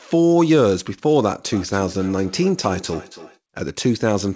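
From 1.52 to 3.4 s each word returns roughly every 300 ms, thinner and ringing, peaking about 20 dB below the speech. This is feedback echo between two devices: one device plays the other's audio, that microphone recaptures it, and neither echo canceller removes it.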